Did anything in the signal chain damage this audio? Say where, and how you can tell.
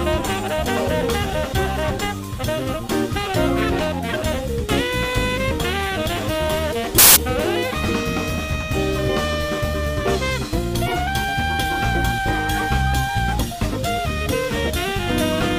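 Yes, the damage sits in the codec layer, on the decode side. Compressed frames were skipped in two places, around 0.56 to 0.66 s and again around 10.82 to 10.97 s. Each time the audio jumps forward by something like 50 ms.

There's also a corrupt frame decoded at about 6.98 to 7.17 s. Here the decoder didn't drop the damaged data. It played it, so flipped bits turned into wrong gains or misread spectral codes, and energy landed at frequencies where it doesn't belong. You hear it as a short glitch that lasts about one frame's worth of time, which is what gives it away as a bad frame rather than a level or wiring problem.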